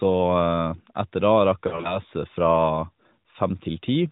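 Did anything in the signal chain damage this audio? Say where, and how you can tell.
Yes, at the network stage: lost AMR speech frames between 1.68 and 1.99 s. The speech breaks into short warbling dips, never a fade to silence, because the decoder repeats the last good pitch and vocal tract settings at lower gain across gaps of at most 40 ms.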